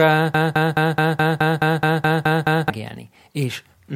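From 0.34 s to 2.7 s the speech gets stuck in a broken-record loop: a piece about 0.21 s long repeats back to back eleven times. Something in the playback or stream chain likely stalled and kept resending its last fragment, so the real audio there is gone.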